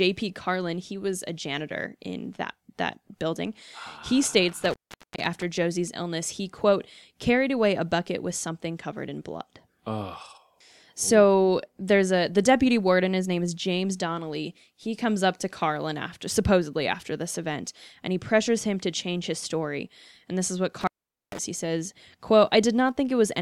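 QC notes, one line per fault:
4.48–5.43 s, intermittent contact: speech drops out for about 0.45 s with crackle at each edge and faint hiss between, as a loose plug briefly opens the line.
20.81–21.39 s, intermittent contact: just after "this is what", the speech cuts out for about 0.45 s, crackling in and out, as a loose cable connection momentarily breaks.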